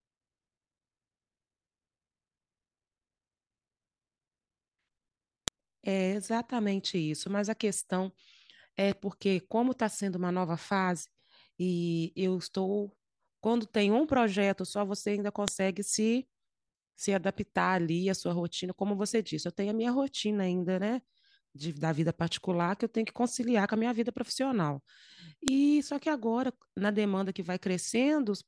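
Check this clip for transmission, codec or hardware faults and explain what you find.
One fault appears: a file header played as audio. Sharp, loud clicks hit at 5.48, 15.48 and 25.48 s, exactly 10 s apart. Each 10 s piece kept its WAV header when joined. Those header bytes play as samples and snap through the speech.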